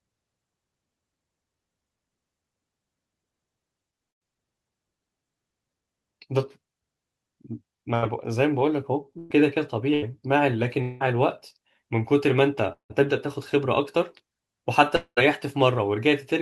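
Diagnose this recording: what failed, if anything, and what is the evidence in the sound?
The network stage shows a burst of packet loss at 4.09–4.23, 7.95–8.04, 9.18–9.32 and 9.94–10.04 s. Between 80 and 120 ms goes missing each time, and concealment holds the last sound as a decaying buzz or hiss. On a spectrogram these appear as smeared, flat harmonic stripes, and the waveform restarts abruptly afterwards.

Longer gaps sound like a long network dropout at 10.82–11.02, 12.72–12.92 and 14.96–15.19 s, with roughly 180 to 220 ms lost each time. The concealed tone fades, then drops to silence at 12.7 and 15.0 s. In those two, the waveform thins to a flat line before the sound resumes further on. The likely cause is late or lost packets in the network, upstream of an Opus call path whose roughly 12 kHz top cut-off is visible throughout.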